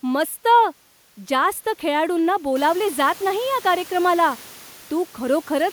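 No technical faults are audible anywhere in this recording.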